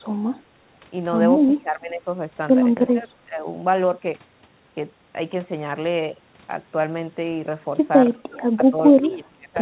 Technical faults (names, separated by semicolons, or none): speech suppressed in double talk